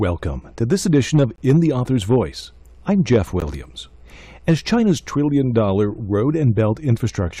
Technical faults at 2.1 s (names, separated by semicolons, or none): hard clipping